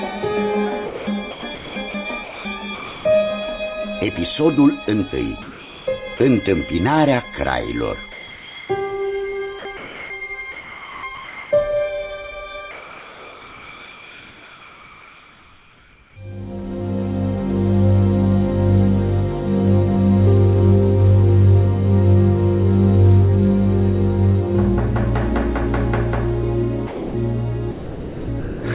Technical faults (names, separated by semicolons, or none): sound chopped by the voice detector; comfort noise in place of the background; sound dropped by the voice detector